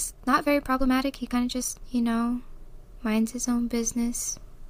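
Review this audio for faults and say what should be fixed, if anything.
From 0.0 to 1.82 s the speech runs at about 1.64 times its natural pace while the pitch stays put, then drops abruptly to normal speed: a time-stretched section. It sounds rushed, likely from software squeezing the passage to fit a length by discarding short slices. A spectrogram shows harmonics at unchanged heights but compressed syllable spacing, and the waveform shows tightly packed envelopes with small discontinuities at splice points. To prevent it, re-record or re-edit the passage to fit rather than compressing it in time.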